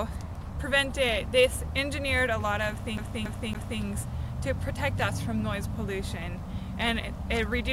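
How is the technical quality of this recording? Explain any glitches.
One glitch disrupts the recording. From 2.97 to 3.82 s, the CD gets stuck on one turn: a scratch throws the laser back a track each revolution, so a 280 ms slice of sound plays three times, with a brief mute at each jump, creating an even, rapid stutter.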